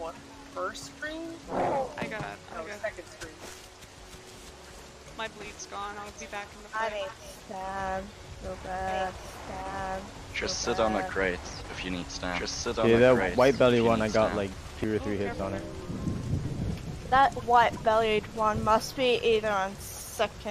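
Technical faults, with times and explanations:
8.88–14.84 s, doubled audio track: a second full-strength copy runs about two seconds behind, starting and stopping abruptly, likely from a slower capture path recording it twice.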